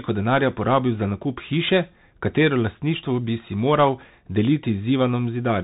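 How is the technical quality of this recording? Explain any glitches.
The recording is degraded by narrowband headset coding. Bluetooth CVSD headset codec, throughout: one-bit up-or-down steps, likely at 64 kbps, cut everything above 3.8 kHz, leaving muffled speech with scratchy s sounds and granular hiss.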